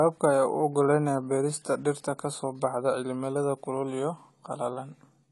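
Throughout the recording, the speech has likely been through AAC compression: an AAC-LC encoder short of bits, at a budget that fits a rate of about 32 kbps. To save data, the encoder discards the top of the spectrum, so nothing is heard above 11.5 kHz, and it quantises the remaining frequency bands coarsely. The codec damage is plainly audible. The speech sounds dull and smeared, with a warbling, fizzy texture.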